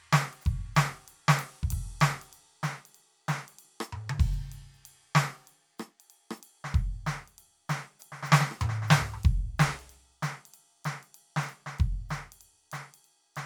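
No technical faults can be heard anywhere in this music clip. Nothing at any point in the recording calls for a timestamp or an explanation.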